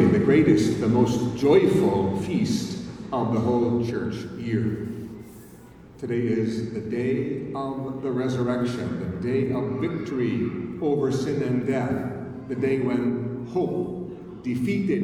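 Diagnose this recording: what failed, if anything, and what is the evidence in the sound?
Nothing in the recording stood out as a fault on listening, so there is no failed stage to point to.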